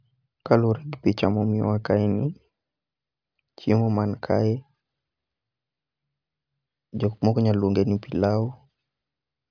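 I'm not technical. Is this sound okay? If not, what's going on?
Yes, nothing wrong can be heard in this recording.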